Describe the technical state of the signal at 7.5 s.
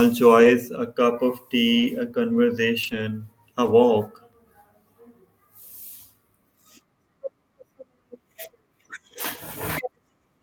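At 7.5 s the speech signal is intact, with no audible dropout, clipping, distortion or other technical fault.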